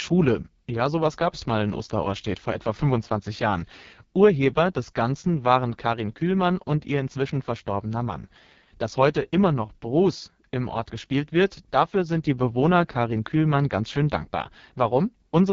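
Throughout the speech, the AMR wideband (HD Voice) codec is running at what sounds like its lowest mode, around 6.6 kbit/s. The heavy coding damage makes the speech rough and raspy, and nothing is heard above about 7.2 kHz.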